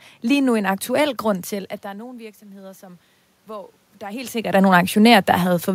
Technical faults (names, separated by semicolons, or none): automatic gain rising